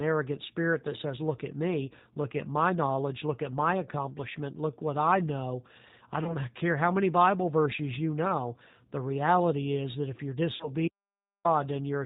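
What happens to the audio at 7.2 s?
At 7.2 s, as throughout, the speech carries plainly audible G.729 codec damage. It is rebuilt from a filter and sparse pulses, so it sounds rough and synthetic. A spectrogram shows nothing above 4 kHz.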